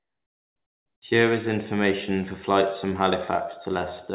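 A short speech clip that opens with comfort noise in place of the background: for the first 1.02 s, up to "is information for flights", the room tone is swapped for a flat, featureless hiss about 22 dB quieter than the background that follows. That's likely discontinuous transmission, where the sender goes quiet until its voice detector triggers and the receiver fills the gap with synthetic noise. Across the clip nothing sits above 4 kHz, which fits a G.711 A-law call at 64 kbps.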